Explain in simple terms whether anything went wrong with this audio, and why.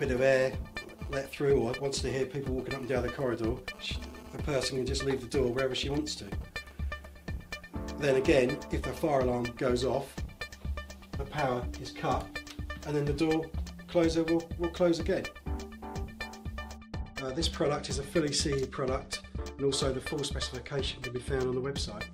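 Clock drift between sender and receiver runs through the whole clip: the sending side's clock runs roughly 4 percent fast, so audio arrives faster than it's played. Unlike a single glitch, this never stops.

Repeated timing corrections follow from 0.03 s to 21.69 s, with the receiver trimming tiny pieces to keep up. They're always cuts, never repeats, heard, if at all, as uneven little hiccups.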